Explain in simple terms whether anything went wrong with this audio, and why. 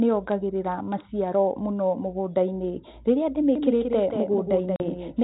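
Two things went wrong. Right after "maciaro mũno mũgũndainĩ rĩrĩa", at 3.55 s, a doubled audio track kicks in and runs to the end. A second, quieter copy of the speech trails about a fifth of a second behind, likely from a slower capture path feeding the mix.

Then, from 4.76 to 4.83 s, there's packet loss on an ADPCM call. A couple of packets dropped out, leaving a sharp silent gap. The decoder loses track of the sender, so the speech comes back briefly a bit rough. The phone-style codec under all this just sounds like a normal narrow phone line.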